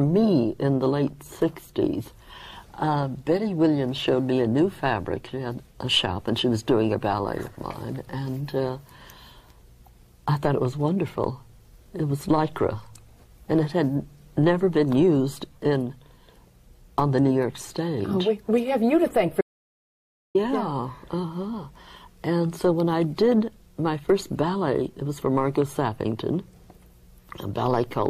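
An audio dropout to silence runs from 19.41 to 20.35 s: the sound cuts off mid-flow into silence, with no room tone, for about 0.94 s before resuming. The input was likely lost while the recorder kept writing silence, so that stretch is gone.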